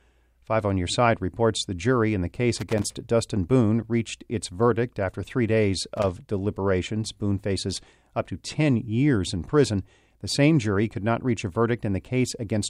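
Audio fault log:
2.57–2.84 s and 5.97–6.09 s: loose connector crackle. Short irregular bursts of scratchy crackle, after "the jury in the" and after "verdict after three days", from a worn contact chopping the signal.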